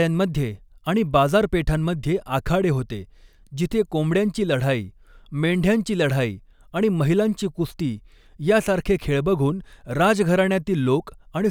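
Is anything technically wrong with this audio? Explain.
No, nothing technically wrong can be heard in this speech recording. No audible faults turn up at any point in it.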